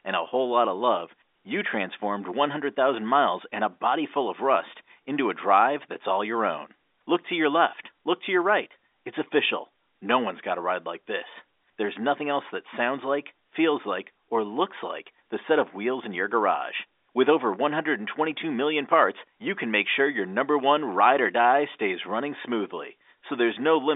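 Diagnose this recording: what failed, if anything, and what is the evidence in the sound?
Nothing has failed in this speech recording. The G.711 telephone coding is working as it should: the sound is confined to the line band of about 300 Hz to 3.6 kHz, nothing reaches above 3.8 kHz, and any coding damage is faint at most.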